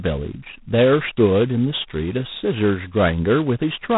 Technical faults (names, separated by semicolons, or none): G.726 ADPCM